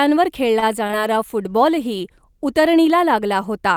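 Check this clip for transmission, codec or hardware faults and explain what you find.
Three kinds of transmission fault are audible in this speech recording, all in its first three seconds.

At 0.59 to 0.64 s there is a short stall from a late packet. A packet arrived after it was due, the jitter buffer emptied, and the receiver held the last sound for about 27 ms until the packet turned up. Playback then resumed from the same point, so nothing is lost, but the sound lingers slightly too long and everything after it runs about 27 ms later. The absence of any gap or skipped material is what separates this from a loss.

At 0.87 to 0.91 s and again at 0.91 to 0.94 s comes short concealed packet loss, two back-to-back holes of about 20 ms each that never reached the decoder. The receiver covered them by extending the preceding sound, roughly 20 ms of fill for the first and only 10 ms for the second, before blending into the real audio again. 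The result is a brief smear or wobble with a slight jump forward. Unlike the earlier stall, actual material is gone here, and a quick consonant could drop out.

From 1.02 to 2.68 s there is a call bitrate drop. The bandwidth estimate fell, and the encoder was pushed to far fewer bits. The sound points to a fall from around 64 kbps to roughly 21 kbps, held at its lowest for about 1.6 s. The speech turns coarser and more muffled as the top end thins, then clears when the rate recovers. This lasts far longer than a packet glitch and sounds like a steady change in quality rather than a momentary break.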